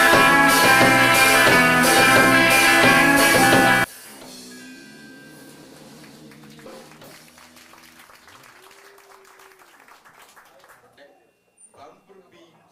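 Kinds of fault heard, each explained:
One channel inverted: from 3.84 s to the end, the whole sound drops by about 28 dB, leaving only a low residue. The likely cause is a stereo channel with reversed polarity, so content common to both channels cancels when summed to mono.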